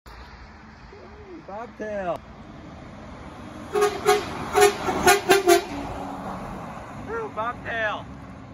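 A brief glitch at 2.16 to 2.19 s marks damaged data in a compressed stream: corrupted bytes made the decoder misread frames and lose sync.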